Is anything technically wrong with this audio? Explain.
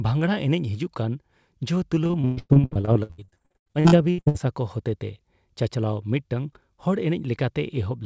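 Yes. From 2.04 to 4.36 s the speech turns choppy and robotic, with repeated packet loss: about 31 short dropouts, the longest 119 ms, cover roughly half that stretch. Each hole is filled by extending the preceding sound, giving a choppy stutter. The call path's wideband band limit, with nothing above 8 kHz, fits a G.722-style codec.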